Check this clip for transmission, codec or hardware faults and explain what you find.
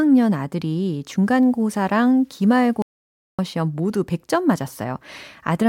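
Two faults stand out, and they overlap in the middle of the speech.

From 1.23 s to 3.50 s the audio shows low bit depth without dither. The likely cause is a stage that rounded the samples to about 9 bits with no dither. The rounding error follows the waveform instead of forming a steady hiss, so the speech gains a grainy, rasping edge that shifts with the signal. The distortion sits roughly 45 dB below the speech level, most audible on quiet syllables and decays.

Inside that stretch, from 2.82 s to 3.39 s, there is an audio dropout to silence lasting about 0.57 s. The speech cuts off abruptly and returns just as abruptly. The gap is digital silence with no room tone, which points to the input being lost, likely through a failed link or a momentary disconnect, while the recorder kept writing zeros. Whatever was spoken in that half second is gone.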